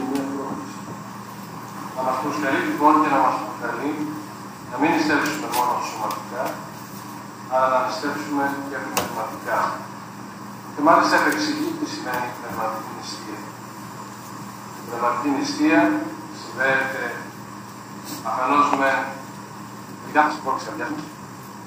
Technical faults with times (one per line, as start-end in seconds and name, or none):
19.93-21.66 time-stretched section